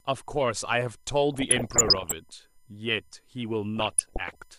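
A USB whine runs through the whole speech clip. It is a fixed tone at 1 kHz, with harmonics up to 20 kHz, where it is strongest. It sits about 40 dB below the speech. The 1 kHz pitch fits the 1 ms USB frame rate, with current draw leaking in through power or ground.

DAB burbling appears from 1.34 to 2.12 s and again from 3.77 to 4.35 s. Weak reception let bit errors slip past error correction, at roughly one percent of bits in the first patch and 0.7 percent in the second. Wrong samples put short blips of noise in single sub-bands. The result is burbling blips over the speech.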